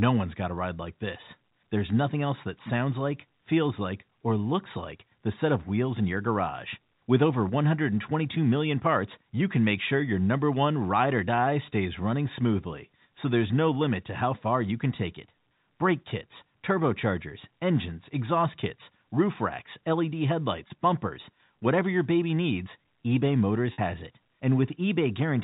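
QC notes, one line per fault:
20.68 s and 23.73 s, packet loss with pitch repetition: gaps of 20 ms and 50 ms, before "bumpers whatever your baby" and "has it", are filled by repeating the last pitch period over the G.711 telephone-band audio, heard as a brief held, buzzy sound, with the longer gap decaying before speech resumes.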